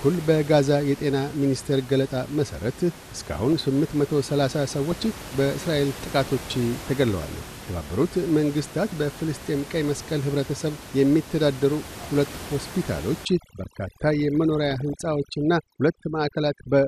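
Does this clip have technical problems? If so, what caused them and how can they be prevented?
Yes. The speech sounds dull throughout, with a gurgling, grainy edge. This is likely MP2 compression at a low rate, consistent with about 80 kbps. MPEG Layer II divides the sound into 32 sub-bands and shares out bits among them. With so few bits, the upper bands drop out and flicker. The remaining bands are coarsely quantised, and that causes the granular texture. Prevent it by encoding at a higher bitrate.

DAB burbling appears at 3.13 to 3.61 s, 4.90 to 5.41 s, 7.36 to 7.53 s and 14.71 to 15.02 s. Weak reception let bit errors slip past error correction into the MP2 data. The damaged samples put short blips of noise into single sub-bands. The error rate was small, well under one percent. Prevent it with better reception, such as a stronger signal or a better aerial.

Overdone noise removal runs from 13.25 s to the end. 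The room noise sits about 16 dB below the speech. The noise reduction was set too strong for it. Frequency bands near its noise estimate are pushed far down, and quiet parts of the speech go with them. The background drops and breaks up into twinkling specks. Prevent it by using a gentler noise reduction setting.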